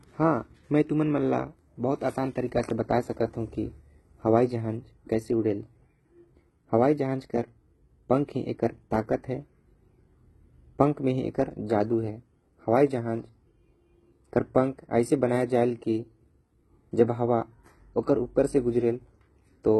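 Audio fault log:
throughout: HE-AAC compression, likely the cause of the heavy damage. The treble of the speech is bright but synthetic, with gritty, lispy s sounds and nothing above 11.8 kHz, which points to a bitrate near 16 kbps. Unlike a plain low-pass, the highs are rebuilt from copied lower bands rather than missing.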